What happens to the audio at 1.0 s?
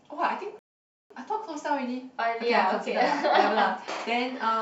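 A rebuffering stall runs from 0.59 to 1.11 s: playback ran out of downloaded audio, so the speech drops to silence, then resumes exactly where it stopped, adding about 0.51 s.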